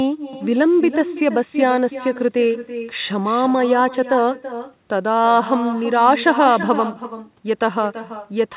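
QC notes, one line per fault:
throughout: echo with no canceller. Every phrase of the speech is followed around a third of a second later by a fainter copy, about 12 dB down, that sounds thinner. The far end is playing the call over a loudspeaker, its microphone captures that playback, and nothing subtracts it, so the talker's own voice returns after the network round trip. The copy stays within the same band as the speech, which stops near 4 kHz.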